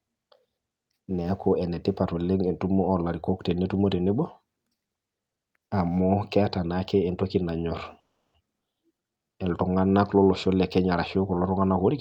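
At 7.99 s the speech halts for about 0.35 s, nearly all of it silence, then resumes with nothing lost. That's a call audio freeze, likely late packets draining the jitter buffer. Right after, at 8.60 to 8.63 s, there's a skip ahead: roughly a tenth of a second drops out and the two sides butt together almost seamlessly, which helps claw back some of the delay. Then from 8.88 to 9.44 s comes a jitter buffer slow-down. The receiver repeats tiny pitch periods to rebuild its reserve, so the speech drags at about 84% speed without changing pitch, adding roughly 0.1 s before "iltunganak lolosho".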